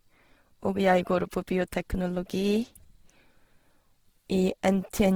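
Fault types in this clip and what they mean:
Opus compression: the speech was likely encoded with Opus in its music (CELT) mode at a starved rate that fits about 16 kbps. Short of bits, it fills bands by folding or noise, so the sound turns plainly grainy and rough while content still reaches about 20.3 kHz.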